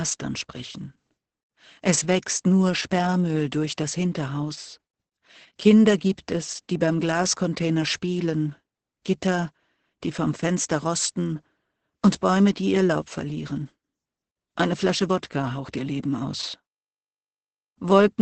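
Throughout the speech, Opus voice compression is working hard: the sound is muffled, hoarse and slightly robotic, which points to a very low bitrate near 10 kbps with the SILK linear-prediction coder alone, modelling the vocal tract and coding its excitation coarsely. On a spectrogram, energy stops abruptly at about 8.6 kHz, a wideband limit, and the harmonics below look smeared and grainy rather than cleanly striated, with blurred consonant bursts.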